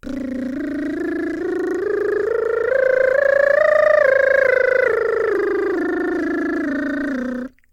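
No faults to report anywhere in this music excerpt.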